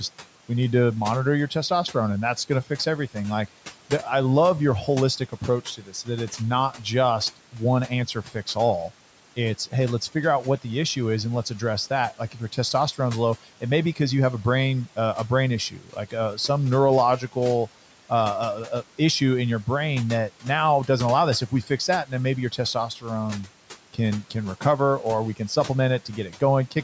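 Speech cut by the noise suppressor affects this speech clip in five stretches: 4.87–9.59 s, 12.31–12.99 s before "low it may be", 15.7–16.38 s after "brain uh a brain", 21.49–24.63 s, and 25.36–26.76 s after "or we". The suppressor mistakes quiet speech for background, so endings and soft consonants sink by about 9–12 dB, only a fraction of a second in each stretch. Unlike a dropout, the sound fades rather than vanishing abruptly, and the room noise dips with it.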